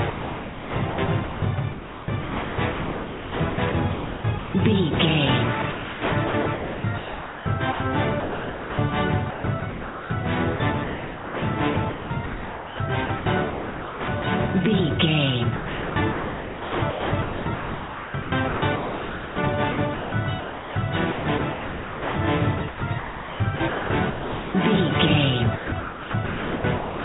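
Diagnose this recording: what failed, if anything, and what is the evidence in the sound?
Sound chopped by the voice detector, in call processing. Over 0.1–4.54 s, 5.62–8.78 s, 9.3–14.24 s, 15.56–24.54 s and 25.56–27 s, the sound keeps cutting to a flat synthetic hiss. The sender's detector likely gated quiet passages, filling them with comfort noise.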